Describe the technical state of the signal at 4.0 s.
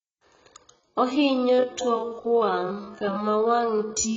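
At 4.0 s the speech sits inside a time-stretched section running from 1.17 s to the end, slowed to about 0.62 times its original pace. Pitch holds steady, so the stretch was likely done by repeating short pieces, and the speech drags.

The same moment also carries AAC compression, present throughout the clip. The dull, fizzy, warbling texture points to heavy quantisation, likely from AAC-LC at a bitrate around 16 kbps that thinned the spectrum.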